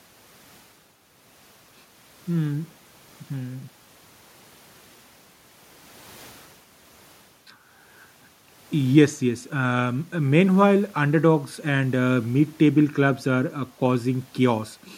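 No technical faults can be heard anywhere in the speech recording.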